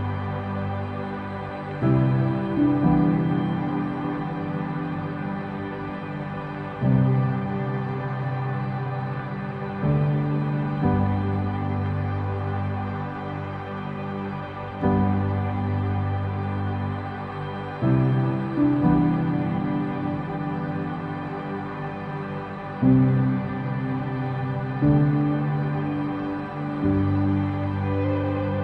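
No faults heard anywhere in the clip.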